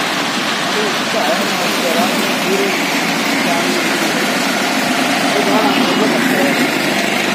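No technical faults are audible.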